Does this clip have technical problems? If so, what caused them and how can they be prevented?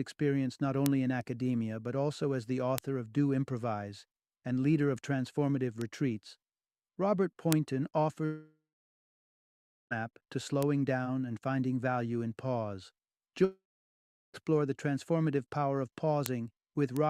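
Yes. Seven sharp, isolated ticks occur at 0.86, 2.78, 5.81, 7.53, 10.63, 16.26 and 16.97 s, each a broadband click with no relation to the surrounding sound. These are bit error spikes: a flipped bit throws one to three samples far off by a power of two before they snap back. Error-checked memory and links with checksums or forward error correction would prevent them.

From 8.25 to 9.93 s and again from 13.45 to 14.36 s, the sound smears into a fading buzz and then goes silent for about 1.3 s and 0.7 s respectively, before resuming with the missing stretch skipped. This is a long network dropout, likely caused by the stream stalling while the receiver extended the last audio until it gave up. A more reliable connection, a larger jitter buffer or retransmission of lost packets would prevent it.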